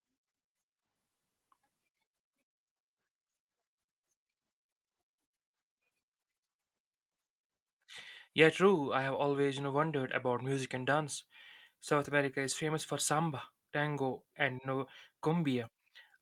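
No technical faults are audible.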